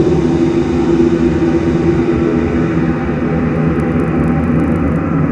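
A clip of sounds, and from 3.48 s to 5.0 s there's a steady 25 Hz tick riding on the signal: a resampler restarted on every block. Each 40 ms block got converted on its own, likely in a 48 kHz to 24 kHz step, so every block edge picks up a small error.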